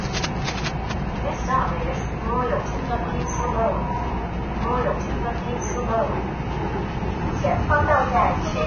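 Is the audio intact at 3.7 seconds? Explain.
No. At 3.7 s, as throughout the clip, the sound is hissy and grainy, with nothing above 6.5 kHz. This is likely heavy Vorbis compression at a low bitrate, which coarsely quantises the treble into noise.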